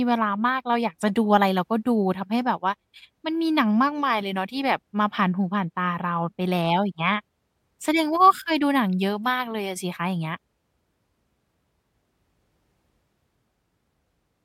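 Listening closely to the speech, nothing stood out as a technical fault at any point.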